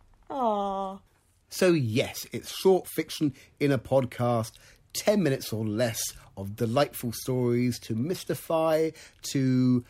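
No technical faults can be heard anywhere in the recording; the signal stays steady and intact throughout.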